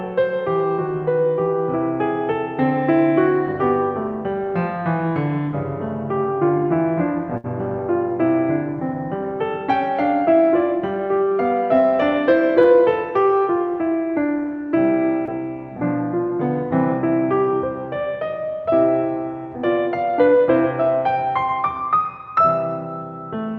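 At 7.37 s the music hits a burst of packet loss lasting until about 7.46 s. The receiver stretched the last received sound for roughly 64 ms, fading it as it went, and then about 60 ms of the music is missing when playback resumes further on. It sounds like a brief held, dimming sound before a skip. On a spectrogram the last sound's pattern runs flat and fades, then the pattern jumps abruptly.

Two instances of short concealed packet loss follow, at 12.62 to 12.66 s and 15.26 to 15.29 s. Each time about 20 ms never reached the decoder in time, and the receiver patched roughly 17 to 18 ms by continuing the preceding sound and blending back into real audio. They pass as a tiny smear or wobble. In the waveform they appear as short smoothed stretches, and on a spectrogram as brief blurs. Throughout, content stops near 8 kHz, consistent with a call codec such as Opus running at a moderate bitrate.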